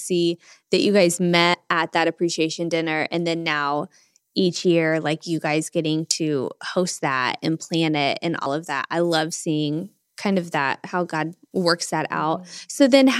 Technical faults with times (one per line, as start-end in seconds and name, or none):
1.54 dropped buffer (overrun)
8.46 dropped buffer (overrun)